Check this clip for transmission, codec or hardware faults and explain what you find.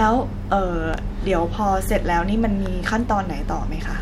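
Two loud pops: at 0.94–0.96 s, well above the speech, and 2.66–2.68 s, somewhat weaker. A single voltage spike was likely added, from a switch, connector or static, with the speech continuing underneath.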